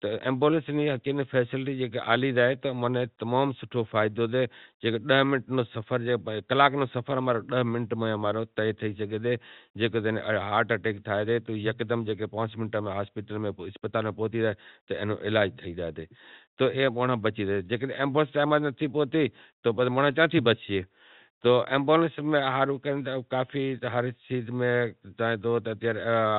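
Nothing's wrong with this speech clip; it's just ordinary G.711 telephone coding doing its usual job, with the sound stopping at around 4 kHz the way a fixed-line call does.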